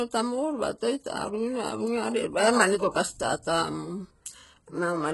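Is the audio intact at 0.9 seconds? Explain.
No. At 0.9 seconds, as throughout the clip, the speech carries heavy damage that is likely from HE-AAC compression at a very low bitrate, consistent with roughly 12 kbps. The codec keeps only the lower spectrum and fakes the treble by copying lower bands upward under a coarse envelope, so those rebuilt harmonics miss the originals. The top sounds artificial, s sounds come out gritty and lispy, and nothing remains above 11.5 kHz.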